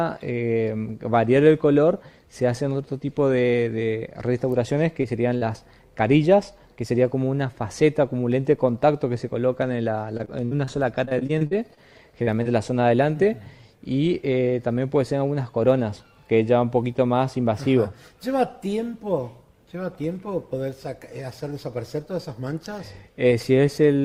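A call-style stream with packets going missing. You get short concealed packet loss at 5.01–5.05, 5.37–5.43, 12.23–12.29 and 12.43–12.47 s, holes of 20 to 40 ms that the decoder papered over by extending the last bit of sound, so each one comes across as a quick smear or wobble. Between 10.17 and 10.69 s and again from 11.05 to 11.79 s it turns into repeated packet loss with a robotic sound: five and then seven dropouts in quick succession, the longest 60 ms, with roughly a quarter and then a fifth of each stretch being synthesized fill, which gives that choppy texture with pieces missing.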